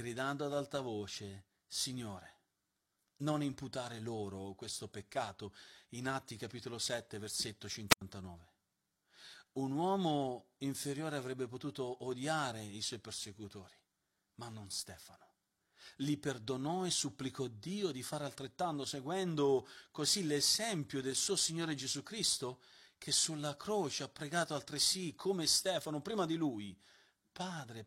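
Wireless microphone squelch dropout at 7.89 to 8.01 s: the fading radio link brings rising hiss before an 86 ms mute, unlike digital gaps.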